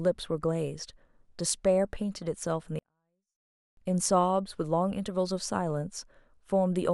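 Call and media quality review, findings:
24-bit alignment error (too quiet), 2.79 to 3.77 s. Speech stays clean but drops about 48 dB, nearly inaudible. Probable component: sample format conversion. Low-byte 24-bit samples read as full 32-bit words, so level sits eight bits too low.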